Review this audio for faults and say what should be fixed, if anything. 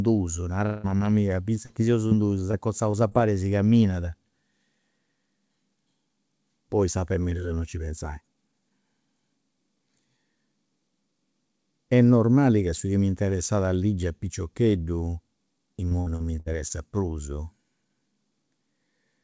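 From 0.66 to 0.86 s there's a long network dropout, likely a burst of lost packets. About 180 ms was lost, and the receiver stretched the last sound over the hole instead of going silent.

Short concealed packet loss shows up at 0.98, 1.66, 2.07, 2.51, 2.91 and 3.09 s. Each is a 20 to 40 ms hole patched by continuing the prior sound, heard as brief smears just before "chi seus", just after it, and just before "e si caminat".

Between 15.89 and 16.72 s there's repeated packet loss (robotic sound). Five gaps, the longest 59 ms, were each patched in turn, so about 23% of that stretch is filled-in audio and it turns choppy. The G.722 path caps everything at 8 kHz.

To prevent all three, fix the network path's loss and jitter and give the jitter buffer more headroom, or add packet redundancy such as FEC.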